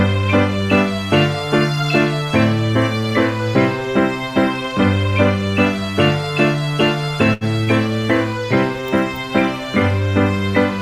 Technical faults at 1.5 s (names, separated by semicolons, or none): none